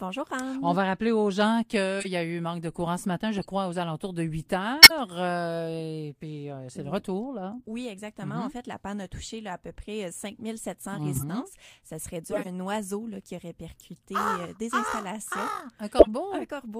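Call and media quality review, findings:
Corrupt frame decoded, eight bursts: 2.00–2.07 s, 3.37–3.45 s, 4.82–4.91 s, 7.57–7.62 s, 11.13–11.23 s, 12.31–12.48 s, 13.79 s, 15.99–16.08 s. Short chirps and noise blips, each spanning a few codec frames; the longest, at 12.31 s, spans about seven. Levels range from faint to near full scale, loudest at 4.82 s and 15.99 s. Component is the decoder. Damaged bitstream is played anyway, so bad gains and codes push energy into wrong bands.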